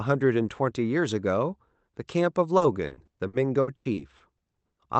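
Speech over what sounds like an Opus call path, band-limited to about 8 kHz, with repeated packet loss (robotic sound) from 2.57 to 4.41 s: roughly a dozen dropouts, some up to 100 ms, patched by stretching prior sound, giving choppy speech with pieces missing.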